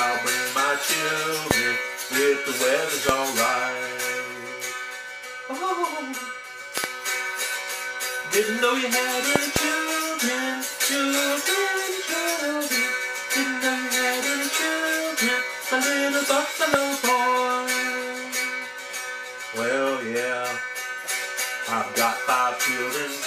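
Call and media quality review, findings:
Loud pops at 1.51–1.53, 3.09–3.11 and 16.74–16.76 s, double pops at 6.78–6.86 and 9.36–9.58 s, peaking about 25 dB over the audio, which continues beneath. Likely voltage pulses from a plug, switch, static or driver glitch, shaped by downstream circuitry.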